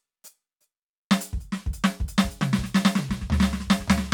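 From 2.23 s to the end, the music carries a doubled audio track: a full-band copy trails about half a second behind, a few decibels quieter. It appears abruptly, with no decay or room colour, unlike an echo, likely from a slower second capture path.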